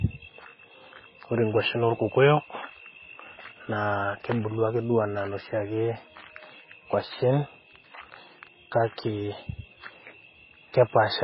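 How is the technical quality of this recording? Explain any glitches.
Quality is poor across the whole speech clip. From start to finish there's heavy MP3 compression, likely: nothing above 5.5 kHz survives, and weak frequency lines flicker between frames, which fits a starved bitrate around 16 kbps. It leaves the speech dull, watery and swirly.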